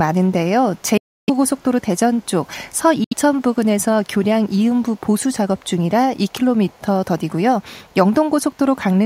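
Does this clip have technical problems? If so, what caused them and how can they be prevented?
Yes. A far-end echo canceller likely let its loudspeaker pickup through, so a very faint copy of the speech trails about 237 ms behind from 0.76 to 6.81 s and again from 7.62 to 7.94 s. Tuning or enabling echo cancellation on that device, or having that side use headphones, prevents this echo leak.

Bluetooth dropouts likely occurred when packets missed their deadline, cutting the audio to silence from 0.97 to 1.30 s and from 3.04 to 3.14 s before it resumes further along. Keeping the headphones close to the source and away from Wi-Fi or other radio interference prevents these dropouts.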